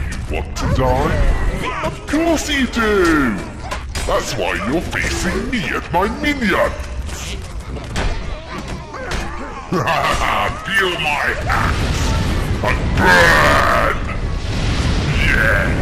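Throughout, the sound is dull, with a gurgling, granular grain, likely from MP2 compression at a low rate in the region of 80 kbps. Too few bits leave upper sub-bands switched off or flickering, and the remaining bands coarsely quantised.

At 1.54–1.63 s and again at 10.78–10.84 s, DAB burbling appears: brief blips of noise in single sub-bands. Bit errors slipped past error correction into the audio data, corrupting samples. The second burst is the denser of the two.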